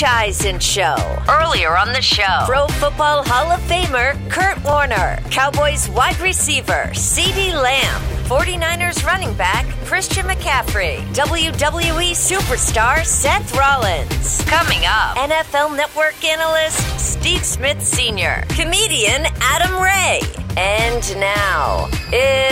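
At 4.73 s the sound skips forward a few milliseconds, joined directly rather than with a silent gap, likely audio missing between 10 s chunks.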